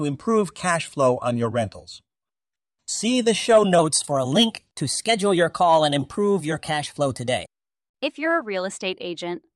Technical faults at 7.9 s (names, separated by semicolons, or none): wrong sample rate